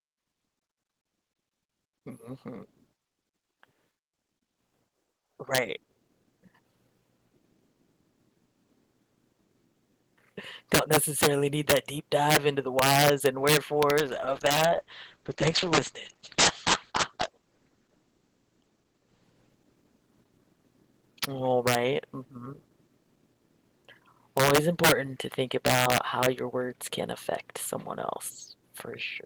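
At 13.99–21.31 s, a call bitrate drop from 32 to 10 kbps leaves speech muffled and watery; the spectrogram loses everything above 8 kHz.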